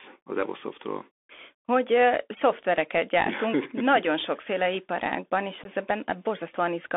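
A Bluetooth headset link carried the speech through the CVSD headset codec for the whole clip. This narrowband scheme sends one bit per sample at 64 kbit/s, signalling only up or down with an adaptive step, so the audio is confined to roughly 300 Hz to 3.5 kHz. The damage is plainly audible: loud high-frequency content outruns the step and distorts, s sounds come out scratchy, and a granular hiss sits beneath the speech. Unconcealed Bluetooth headset packet loss also occurs between 5.64 and 5.67 s, just after "nagyon sokféle iparágban és". A few voice packets between headset and phone went missing, and silence or an idle pattern filled their slot with no concealment. About 15 ms of speech drops out as a short hole with abrupt edges, and because the link is CVSD, the speech resumes quieter for a moment as the codec's step size rebuilds.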